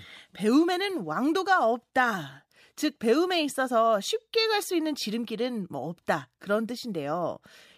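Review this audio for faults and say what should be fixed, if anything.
No faults; nothing needs fixing.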